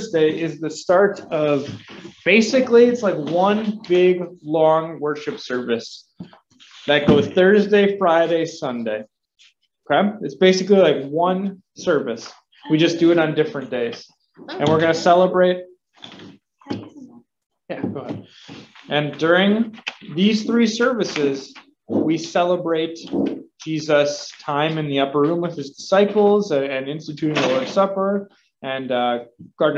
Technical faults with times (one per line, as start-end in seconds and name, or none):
none